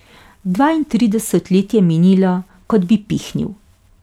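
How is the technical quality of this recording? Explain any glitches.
No technical faults can be heard anywhere in the recording, and the speech signal stays continuous and intact throughout.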